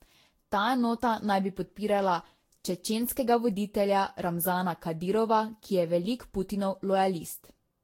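From start to finish the speech sounds swirly, hollow and smeared, with consonant attacks blurred and nothing above 16.6 kHz. The texture is worse than a single encode at this quality would leave, which points to generation loss. The audio was likely decoded and re-encoded around seven times with a Vorbis-like codec at roughly 60 kbit/s. Each pass quantised again on shifted frames, so the noise and spectral gaps built up.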